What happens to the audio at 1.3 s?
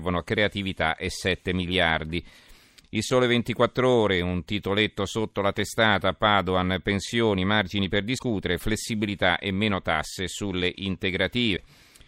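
Nothing goes wrong at 1.3 s; the speech plays through that moment intact, with no dropout, click or distortion.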